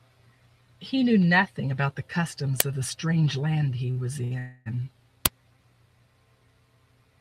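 At 2.60 s an uninitialised buffer reaches the output: a block was played before any audio was written into it, so stale memory came out as samples. It is a brief, loud burst of digital noise lasting about 11 ms, which fits a 512-sample buffer.

At 3.91 to 3.98 s and again at 4.24 to 4.33 s there is a short stall from a late packet. Each time, the jitter buffer ran dry, so the receiver stretched the last sound for 47 ms and then 66 ms before carrying on from the same point. Nothing is lost, but the sound hangs on slightly too long with a slight buzz or dip.

From 4.39 to 4.68 s comes a call audio freeze, likely from packets held up in transit. The final sound is drawn out as a buzz or hiss that fades for 270 ms without dropping to silence, then the audio resumes exactly where it stopped. This inserts a gap without removing anything.

At 5.26 s a second uninitialised buffer produces another sharp, loud burst of noise, this one about 5 ms long, which points to a 256-sample block.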